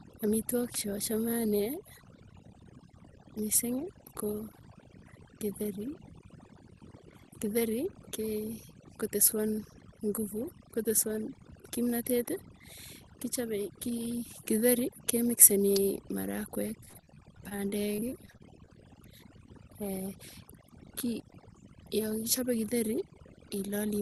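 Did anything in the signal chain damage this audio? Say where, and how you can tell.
Yes. At the call-processing stage, overdone noise removal runs through the whole speech clip. The suppressor pulls individual frequency bands down whenever they approach its noise estimate, taking quiet speech detail with them, so pauses fall to near silence with twinkling specks.

In the analogue wiring, two sharp snaps sit on top of the sound at 0.74 s and 15.76 s, each only a few milliseconds long. Their abruptness and independence from the speech point to a likely electrical switching spike, such as a nearby switch or static discharge arcing into the line.

On the network, repeated packet loss makes the sound robotic from 16.85 s to 18.69 s. Holes of up to 42 ms arrive in quick succession, and about 17 percent of that stretch is patched by extending the previous sound. The result is choppy, with pieces missing. 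The audible band ending near 12 kHz fits the Opus call path carrying it.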